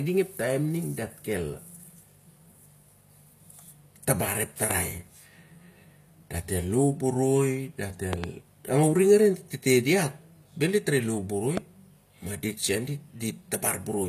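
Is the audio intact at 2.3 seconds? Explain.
No. At 2.3 seconds, as throughout, the speech has gritty, lispy sibilants and nothing above 14.9 kHz, likely from HE-AAC compression, which rebuilds copied treble rather than simply dulling it.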